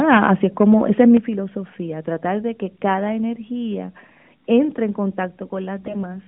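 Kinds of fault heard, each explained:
Microphone overload: The speech peaks are flattened with a harsh crackle from 0.11 to 0.32 s, roughly 6 dB over full scale, and from 0.99 to 1.15 s, about 2 dB over, just before "filosofía tratar de que". The likely cause is input gain set too high.
Microphone volume stepped down: The speech and background drop abruptly in a single step by about 3 dB at 0.17 s, about 8 dB at 1.17 s before "filosofía tratar de que", and about 2 dB at 5.25 s after "cada energía entre en". This is likely an automatic input-gain correction after the input ran too loud or clipped.
AMR bit errors: From 5.80 to 6.05 s, the speech turns hoarse and gargly while keeping roughly its pitch and level. Corrupted detail bits in eight 20 ms frames misplace the excitation pulses, at a bit-error rate of a few percent, within otherwise light narrowband AMR coding.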